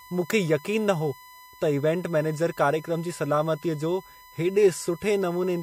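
From start to finish there's a steady USB whine sitting under the speech, a fixed tone at 1 kHz, which is also where it's strongest, roughly 25 dB below the voice. That pitch is the giveaway: the USB bus pulls current in 1 ms frames, and that regular tug on the power or ground line leaks into the audio path as a constant 1 kHz hum that never drifts, however the talking changes.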